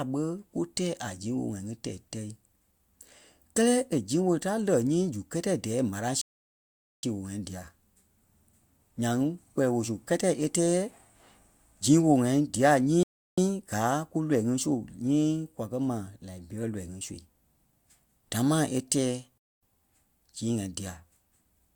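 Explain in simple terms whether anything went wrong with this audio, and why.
The speech stops dead three times and then picks up exactly where it left off. That's a rebuffering stall: the player ran out of downloaded audio, waited for more, and carried on. Nothing's missing, just extra silence. The first runs from 6.21 to 7.03 s, about 0.8 s, right before "sii woo". A shorter one is at 13.03 to 13.38 s, and the last, at 19.38 to 19.63 s, comes just after "damaa e tɛɛ".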